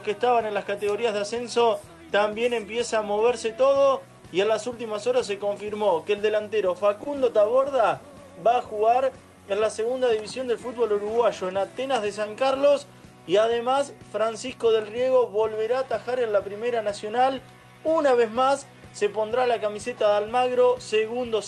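At 7.03 to 7.08 s and again at 7.62 to 7.67 s there is a short stall from a late packet. Each time, a packet missed its playout slot, the jitter buffer drained, and the receiver stretched the preceding sound by about 20 ms before resuming where it left off. Nothing is lost, and playout runs 20 ms later after each event. Each stall is heard as a brief held sound with a slight buzz or dip, over the Opus call path's top end, which stops near 12 kHz.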